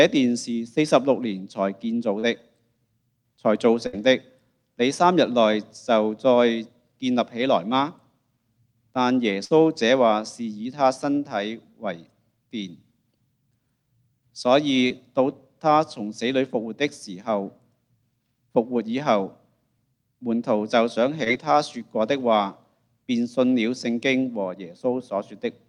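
At 2.19 s, short concealed packet loss: about 40 ms never arrived, and the receiver extended the preceding sound to cover it, leaving a brief smear. At 3.87 s and 9.45 s, a burst of packet loss dropped 60 ms each time; the receiver's stretched, fading continuation gives a momentary buzz or hiss before the audio resumes further on. The same short concealed loss recurs at 14.88 s and 21.24 s, each a 20 ms gap bridged into a brief smear or wobble.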